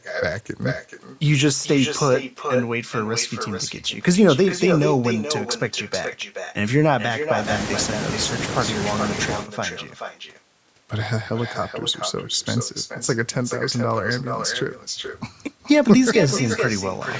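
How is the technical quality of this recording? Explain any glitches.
The recording has one persistent glitch: an echo with no canceller, present for the whole clip. The call's microphone processing caps the sound at 8 kHz.

From start to finish, every phrase returns as a second copy about 0.4 s later. The far end played the call through a loudspeaker. Its microphone captured that sound, and no echo canceller removed it. The copy travelled back across the network. It sits about 8 dB below the direct speech. It sounds thinner, like a trailing shadow on each phrase.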